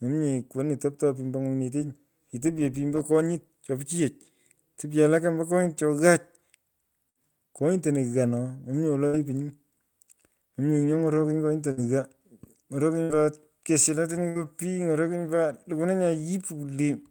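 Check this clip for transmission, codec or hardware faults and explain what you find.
There's one recurring problem in this speech: bursts of packet loss, five of them, at 7.09–7.18, 9.07–9.16, 11.71–11.80, 13.03–13.12 and 14.29–14.38 s. Each time a run of packets never arrived in time, so the receiver stretched the last bit of sound for about 55 to 62 ms, fading it out, and then jumped ahead. You hear a brief smeared hold, then a skip where about 60 ms of speech is simply gone.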